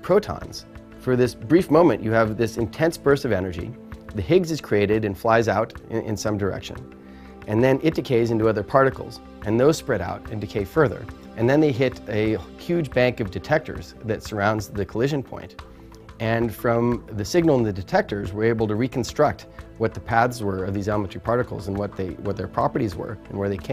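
Nothing here calls for comment: the audio runs along without a single glitch, dropout or distortion to point to.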